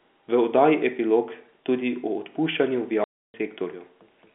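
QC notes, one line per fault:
3.04–3.34 s, packet loss filled with silence: 300 ms of packets went missing and silence replaced them, cutting the speech with a hard-edged hole that fits 20 ms packets.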